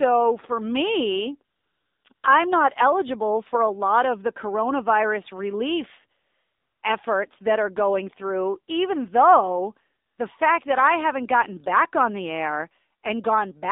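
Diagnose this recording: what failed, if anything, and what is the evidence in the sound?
The speech sounds boxy, buzzy and synthetic, confined to roughly 250 Hz to 3.7 kHz with no air above. This is AMR narrowband mobile codec damage at the codec stage: a low-rate vocal-tract model, consistent with the 7.4 kbps mode, rebuilds the speech from a few pulses per frame.

The background changes to a smooth, steady hiss that switches in abruptly at 1.56–2.04 s (after "for me", before "I'm not eligible for"), 2.14–2.24 s, 6.20–6.82 s (after "of the coronavirus relief", before "efforts that are going") and 10.06–10.18 s (after "going through even though", before "fact that I haven't"). That is AMR comfort noise: speech frames stopped and the receiver substituted synthetic noise.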